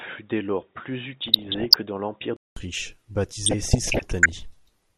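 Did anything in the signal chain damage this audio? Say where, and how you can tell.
Yes. From 0 to 2.57 s the speech is dull and boxy, with nothing above 3.8 kHz, a level about 5 dB lower and faint added noise. A 200 ms silence precedes the brighter sound. At the driver stage the input likely switched from a poorer device to a better one.

Throughout, the speech is dull and gurgling, with a granular roughness on the coarsely quantised bands that remain. At the codec stage this is likely MP2 compression, plainly audible, which fits a rate around 80 kbps leaving too few bits for the upper sub-bands.

From 1.25 to 1.76 s and from 3.44 to 4.40 s, bursts of burbling noise break over the speech. This is DAB burbling at the transmission stage: bit errors slipping past error correction corrupt samples and scale factors, so single sub-bands jump in level frame by frame.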